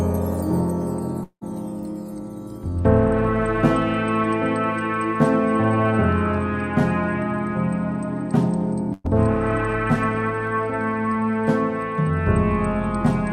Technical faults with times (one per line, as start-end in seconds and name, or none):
1.23-1.43 long network dropout
8.93-9.06 burst of packet loss